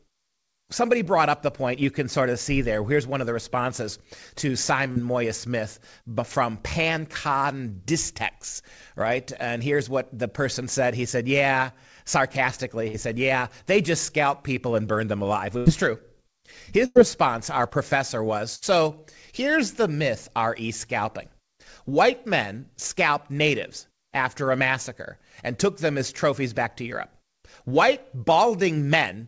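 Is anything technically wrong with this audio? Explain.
Yes. The speech has two kinds of network dropout, heard through a call path whose band stops at 8 kHz, which fits G.722 at around 64 kbps.

Short concealed packet loss occurs at 4.92–4.98 s, right after "of the responses to", and at 17.69–17.73 s. About 40 ms and 20 ms of audio failed to arrive. The receiver extended the preceding sound and then crossfaded back, so you hear a brief smear or wobble. Unlike a burst, nothing audibly fades out.

Bursts of packet loss occur at 12.88–12.95 s, 15.57–15.68 s (between "and burn them alive" and "is true"), 16.86–16.97 s and 18.55–18.64 s. Each loses roughly 60 to 100 ms in a row. Concealment holds the last sound as a buzz or hiss that fades, then the speech resumes further along with that stretch gone. The longer fill and the fade are what distinguish these from the short losses.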